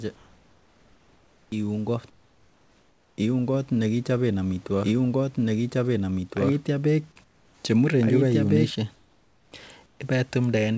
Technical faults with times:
0.16-1.52 comfort noise in place of the background
2.10-3.18 comfort noise in place of the background
4.84-8.70 doubled audio track
7.24-7.64 comfort noise in place of the background
8.94-9.52 comfort noise in place of the background
9.86-10.00 comfort noise in place of the background

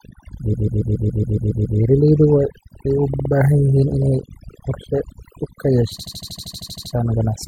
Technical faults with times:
0.00-7.47 overdone noise removal
0.53-1.78 repeated frames
3.14-3.31 repeated frames
5.98-6.92 repeated frames

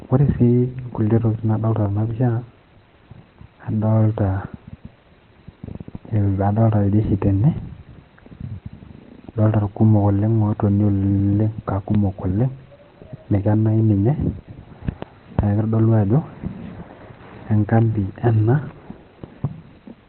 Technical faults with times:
0.00-20.09 Opus compression
5.96 block of digital silence
7.58 block of digital silence
11.94 block of digital silence

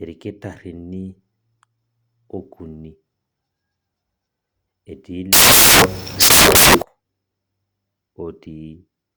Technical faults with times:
5.33-6.82 samples built from the wrong bytes

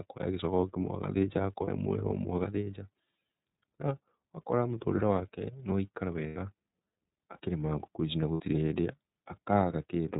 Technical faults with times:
0.00-10.19 iLBC codec
1.65-1.69 lost iLBC frames
6.27-6.37 lost iLBC frames
8.34-8.41 lost iLBC frames

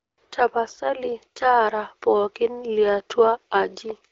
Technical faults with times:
none

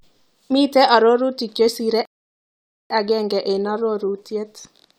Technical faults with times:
2.05-2.90 rebuffering stall

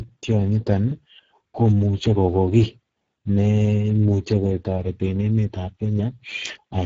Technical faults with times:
0.00-6.85 Speex codec

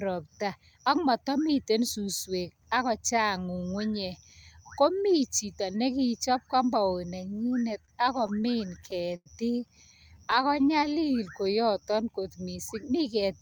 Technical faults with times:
7.49-9.28 repeated stalls (stutter)
10.14-12.39 jitter buffer slow-down
10.31-10.74 repeated stalls (stutter)

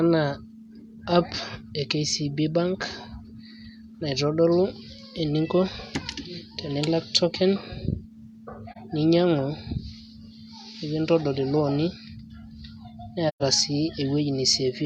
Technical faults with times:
8.71-8.77 AAC frame loss with muting
13.28-13.43 AAC frame loss with muting

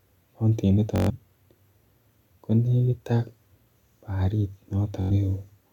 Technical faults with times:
0.96-1.10 Bluetooth stutter
5.01-5.11 Bluetooth stutter

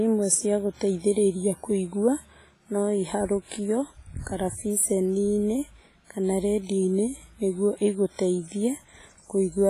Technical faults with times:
0.00-9.69 WMA compression

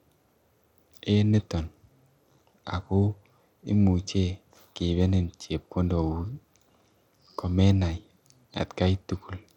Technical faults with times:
0.00-9.56 Bluetooth SBC compression

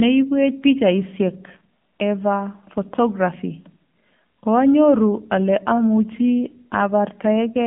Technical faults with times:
0.00-7.67 AMR narrowband mobile codec
6.12-6.19 AMR bit errors

